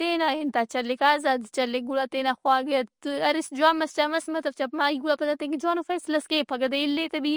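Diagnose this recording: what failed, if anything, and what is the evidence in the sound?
Two faults run through the whole speech clip. The first sits at the codec stage: nothing survives above 10.6 kHz, and the sibilants have a watery, swirling, chirpy quality with smeared consonant onsets. The likely cause is MP3 compression at a bitrate starved enough, around 40 kbps, to force a hard treble cut and discard weaker spectral lines. A spectrogram would show a flat ceiling at 10.6 kHz, with isolated blocks of energy flickering on and off frame by frame just beneath it.

The second fault is sample clock jitter at the converter. The clock's timing wanders on the order of a couple of microseconds, so each sample lands slightly off-time, and the error scales with how steeply the waveform is moving. It is audible as a fine roughness or hiss riding roughly 35 dB below the speech, strongest on loud and bright sibilant passages and disappearing in the pauses. 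On a spectrogram it shows as a broadband haze that tracks the signal level rather than a steady noise floor.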